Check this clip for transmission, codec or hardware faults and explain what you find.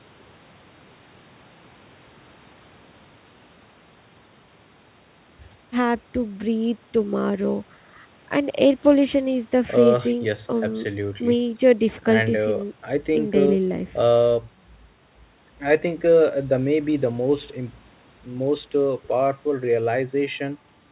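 No transmission, codec or hardware faults can be heard anywhere in the speech. It has the narrow, telephone-like band of a working call path, with nothing above 4 kHz, which fits G.711 A-law coding at 64 kbps.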